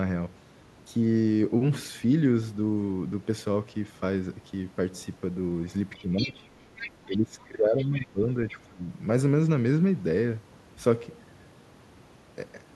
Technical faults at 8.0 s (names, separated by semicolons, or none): speech suppressed in double talk; other side's voice leaking through